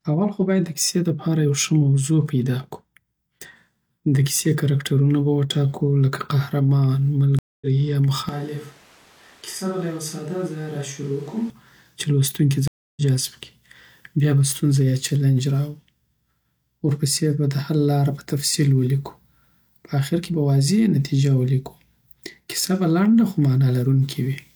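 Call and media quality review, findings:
Stream reconnect, 7.39–7.66 s and 12.68–13.02 s: silence of 226 ms, then 291 ms. Audio resumes roughly 0.2 s and 0.3 s further on, with content skipped. Player dropped the connection and restarted the decoder mid-stream. A plain dropout would resume where it stopped, with no skip.

Switch to a distant microphone, 8.29–11.5 s: sound abruptly turns roomy and hollow, with thinner bass. Level drops about 10 dB, and background noise sits about 25 dB below the speech. Likely the close mic failed and the capture fell back to a far one. It differs from added reverb because tone, level and noise all change at once, at both edges.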